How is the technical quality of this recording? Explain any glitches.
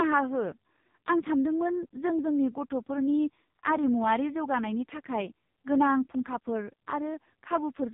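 Poor: the speech has gone through an AMR narrowband mobile codec for the whole clip. Throughout, nothing above 3.8 kHz survives, and a vocal-tract model rebuilds the voice from sparse pulses, leaving it heavily buzzy and synthetic, which fits AMR-NB at a very low bitrate, around 5 kbps. That artificial texture distinguishes it from a plain low-pass filter.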